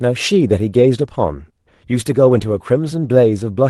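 No technical faults occur at any point in this speech, which comes across with the limited bandwidth typical of a call codec.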